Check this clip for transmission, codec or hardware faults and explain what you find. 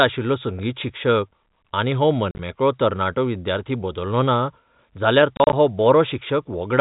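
Two bursts of dropouts break up the speech. From 2.31 to 2.39 s and from 5.37 to 5.53 s, short hard-edged silent gaps appear, about 60 ms and 80 ms in total, none longer than 40 ms. This is packet loss filled with silence: lost packets were replaced by dead air, with an abrupt cut at each edge. The telephone band, capped at 4 kHz by the G.711 coding, is heard throughout.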